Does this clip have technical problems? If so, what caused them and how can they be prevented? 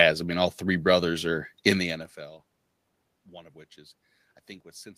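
No, the signal shows no technical faults: the background room sound is part of the recording itself, and the change in level about a second and a half in comes from the talker shifting position relative to the microphone, not from the system.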